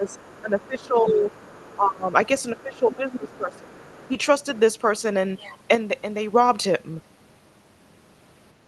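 The clip is speech, and several stretches show an echo canceller struggling with double talk. From 0.0 to 1.26 s, again from 1.76 to 2.13 s, and from 2.63 to 4.17 s, the talker's level sinks in pieces. It drops by roughly 20 dB at worst in the first two spans and about 15 dB in the third. This is likely speech suppressed in double talk. The canceller cannot tell the near talker from loudspeaker echo, so it ducks both. Each of the first and third spans loses around a second of speech, and the middle one about 0.4 s. At the same time, a second voice sits faintly underneath, from 0.07 to 1.76 s and from 2.58 to 4.1 s. It is roughly 30 dB below the talker. That points to the other side's voice leaking through, likely as residual echo. The far end plays on a loudspeaker, the microphone picks it up, and the canceller does not remove all of it. From 5.75 to 6.33 s the level falls abruptly by 6 dB and then recovers. 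This is one channel dropping out, likely on a stereo source folded to mono. The shared content halves in amplitude, which is exactly a 6 dB step. The audio also carries Opus coding noise with no content above about 12 kHz, which fits a call codec running near 32 kbps.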